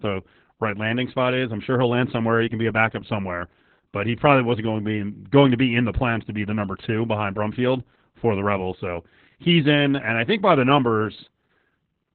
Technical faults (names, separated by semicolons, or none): Opus voice compression